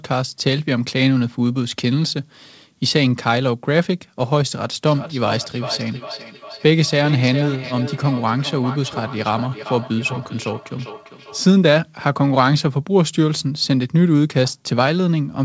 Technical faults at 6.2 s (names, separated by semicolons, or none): feedback echo between two devices